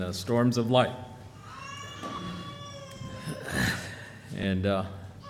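At 2.16 to 2.18 s, and again briefly at 4.43 s, lost LE Audio frames leave the decoder refilling the gap with the previous spectrum under random signs. Each gap, fitting two and one 10 ms frames, sounds like a tiny noisy smear and shows as a short blurred vertical patch on the spectrogram.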